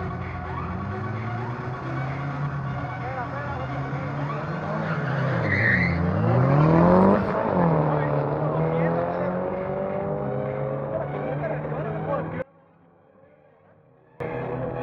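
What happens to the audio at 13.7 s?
At 13.7 s you're in the middle of an audio dropout to a faint residue, running from 12.42 to 14.2 s, about 1.78 s. The sound cuts out abruptly, leaving only a faint leak about 25 dB down, likely the signal lost while the path stayed live.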